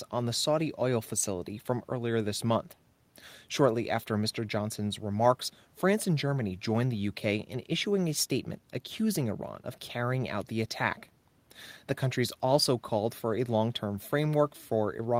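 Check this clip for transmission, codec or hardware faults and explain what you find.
Nothing here points to a transmission, codec or hardware problem; the speech comes through steady and intact, with nothing to flag.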